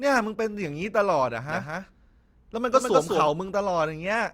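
Speech with a doubled audio track from 1.49 s to 3.27 s: a second full-band copy runs about a fifth of a second behind, roughly as loud as the original, likely from a second, slower capture path. Unlike an echo it has no decay or room colour, and it cuts in and out abruptly.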